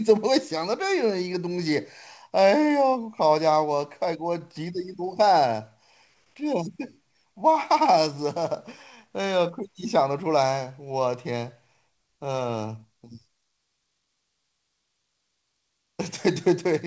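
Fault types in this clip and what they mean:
Nothing stood out as a fault on listening to this speech, which comes through a call path with no content above about 8 kHz.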